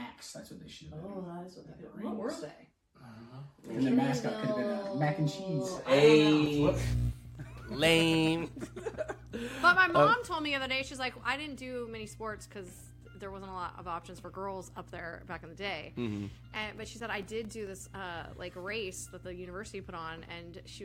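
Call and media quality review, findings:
CD scratch ticks, two bursts: 6.02 to 7.80 s (nine ticks) and 16.33 to 17.67 s (seven), about five a second, longest about 4 ms and 7 ms respectively. Disc surface damage beyond what error correction can rebuild, so the player interpolates or mutes once per revolution.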